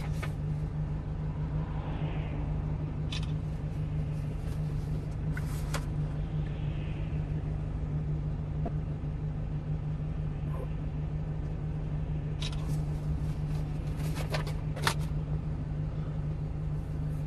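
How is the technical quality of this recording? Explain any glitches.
There's one real glitch to flag. From 8.66 to 8.68 s there's a corrupt frame decoded: damaged bits in a handful of compressed frames got played anyway, so misread gains and codes scatter energy into the wrong frequencies, giving a short chirp, squeak, blip or burst of noise peaking around -20 dBFS.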